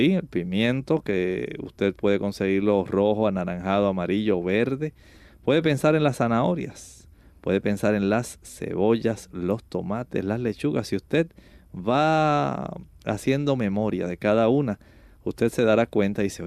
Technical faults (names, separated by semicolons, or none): none